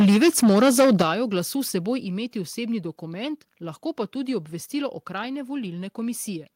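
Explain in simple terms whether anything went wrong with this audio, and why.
Microphone overload, from the start to 1.02 s: the loudest speech sounds harsh and crackly with flattened peaks, likely because the microphone input was set too high.

Microphone volume stepped down, at 1.02 s and again at 2.04 s: voice and background suddenly get quieter, first by a large step, then a smaller one. The likely cause is software turning the microphone down after hearing the distortion.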